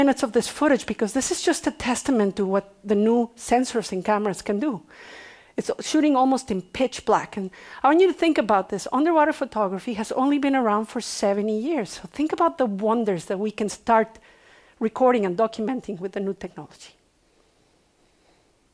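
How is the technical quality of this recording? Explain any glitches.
No glitches or technical faults can be heard anywhere in the recording, so there is nothing to explain.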